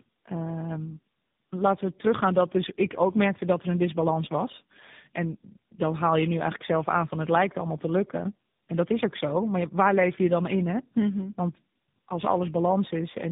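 From start to end, the speech suffers tandem speech coding. The sound points to three low-rate speech coders in a row, likely AMR-NB, then GSM full rate, then AMR-NB again, with G.711 links between them. Each border decodes the speech and codes it afresh. Each coder adds its own errors on top of the last. The result is rough, muffled and warbly. Nothing is left above 3.7 kHz.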